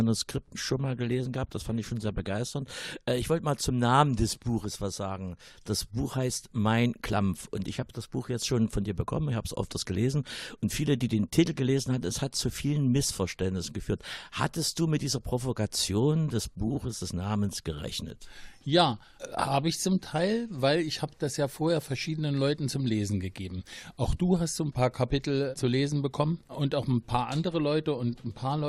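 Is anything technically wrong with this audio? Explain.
Yes. From 0.71 to 2.47 s comes a call bitrate drop. The encoder gets far fewer bits and codes the sound coarsely for about 1.7 s. The top end dulls and the sound turns rough and watery. This fits a fall from 64 kbps to 16 kbps.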